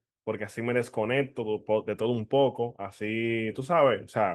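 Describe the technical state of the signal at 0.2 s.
At 0.2 s the speech is intact, carried through Opus voice compression in its full-band hybrid mode with only light coding damage and no fault at that point.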